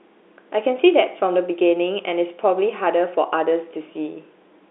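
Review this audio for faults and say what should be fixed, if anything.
Nothing here needs fixing; no faults are audible.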